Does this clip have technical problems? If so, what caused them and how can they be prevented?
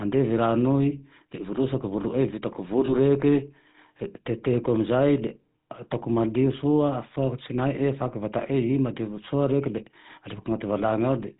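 Yes. The GSM full-rate codec runs throughout, giving buzzy, gravelly roughness with nothing above 4 kHz, unlike plain band-limiting, which stays smooth. This fits 13 kbps coding with coarsely sampled excitation. Prevent it by using a wideband codec such as AMR-WB or Opus.

Lost GSM frames appear from 2.86 to 2.93 s as a brief metallic ring. The last good frame is repeated rather than leaving a silent gap, which points to one missing frame. Prevent it with better radio coverage or stronger error protection on the link.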